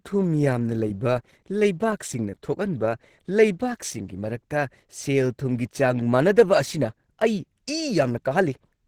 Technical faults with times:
0.00-8.88 Opus compression

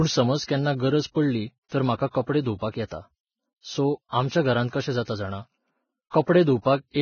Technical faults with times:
0.00-7.02 Vorbis compression

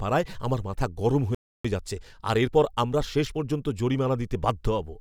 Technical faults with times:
1.35-1.65 playback stall
1.65-3.63 time-compressed catch-up

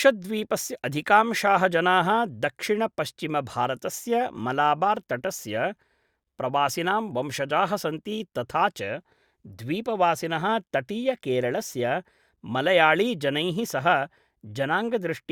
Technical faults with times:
none

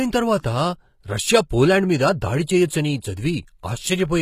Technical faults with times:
0.00-4.21 HE-AAC compression

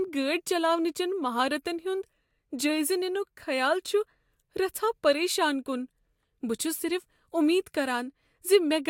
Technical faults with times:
none

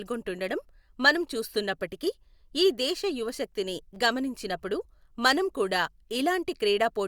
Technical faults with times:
3.95 repeated buffer

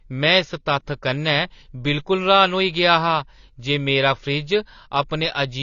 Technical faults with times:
0.00-5.62 AAC compression

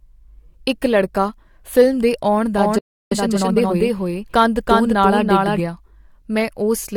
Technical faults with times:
2.57-5.60 doubled audio track
2.79-3.12 playback stall
3.12-3.76 time-compressed catch-up

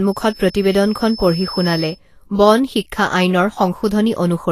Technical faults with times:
0.00-4.51 Vorbis compression
0.00-2.00 feedback whistle

